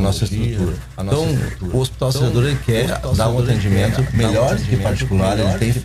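A doubled audio track runs through the whole clip: every sound is followed by a second, full-band copy about a second later, only around 5 dB quieter than the original. The repeat has no decay tail or added room colour, so it sounds like a clean duplicate rather than an echo. This points to the same signal reaching the mix twice, most likely through a second, slower capture path or an edit that left two out-of-step copies.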